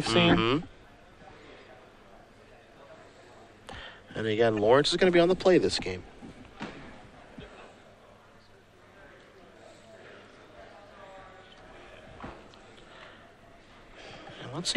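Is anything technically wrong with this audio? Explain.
Yes. From 4.57 to 4.59 s a corrupt frame is decoded: flipped bits in a few compressed frames misplace energy, causing a brief glitch heard as a chirp, squeak, blip or burst of noise, visible as a stray spectrogram smear peaking near -25 dBFS.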